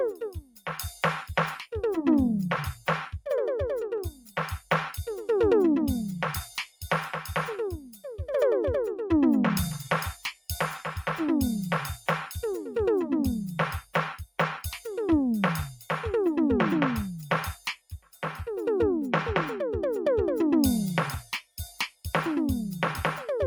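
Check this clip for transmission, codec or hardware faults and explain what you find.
The music has two related faults, both from a speech-oriented noise suppressor.

Noise suppressor applied to music or sounds, throughout: the processor treats sustained tones and reverb as noise and rides their gain down, producing a pumping level swing of roughly 5 dB. On a waveform, the envelope breathes unevenly; on a spectrogram, held partials and tails fade unnaturally soon.

Sound cut by the noise suppressor, at 0.11–0.67 s, 4.08–4.37 s, 7.76–8.04 s, 17.56–18.23 s and 21.25–21.59 s: the suppressor misjudges these passages as noise and pulls them down hardest, by about 13 to 18 dB. Sustains sink or decays cut short, appearing as sudden dark gaps in the spectrogram and notched dips in the waveform.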